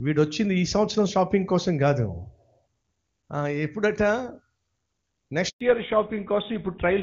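Speech, carried as HD Voice whose clean wideband sound fits AMR-WB at 23.85 kbit/s, has a handover gap from 5.49 to 5.61 s: the voice dies away into 120 ms of silence, unlike a dropout, because the link switches networks and no frames arrive. From 5.61 s to the end, fallback to narrowband removes everything above 4 kHz, so the voice turns duller and rougher, consistent with GSM full rate at 13 kbit/s, rather than low-rate AMR-WB rasp.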